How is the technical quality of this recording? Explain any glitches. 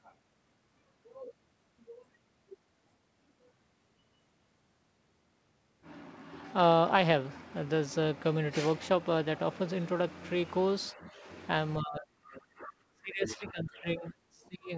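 The recording has two kinds of fault late in the clip, both typical of a call with simultaneous talk. The audio stops at 8 kHz, which fits a G.722 call codec around 64 kbps.

Speech suppressed in double talk, 10.91 to 11.28 s and again from 11.81 s to the end: the talker dips by roughly 10 dB at first, then by about 25 dB, likely because the echo canceller turned everything down when it couldn't separate the talker from loudspeaker echo.

Other side's voice leaking through, at 13.3 s: a brief scrap of a second voice sits about 15 dB below the speech, likely residual loudspeaker echo the canceller failed to remove.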